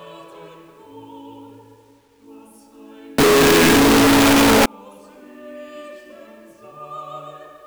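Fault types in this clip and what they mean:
Signed and unsigned mixed up: from 3.18 to 4.66 s, very loud, harsh distortion, likely a flipped top bit; the waveform jumps across its whole range and the spectrogram floods broadband.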